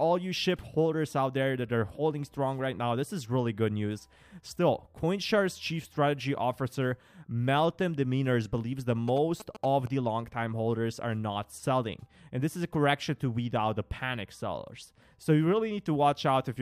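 A nearby 2G phone sending signalling traffic has had its radio bursts rectified by the audio circuit, producing GSM signalling bursts from 9.08 to 9.88 s: a galloping dit-dit-dit of short 217 Hz buzzes, sitting roughly 10 dB below the wanted sound.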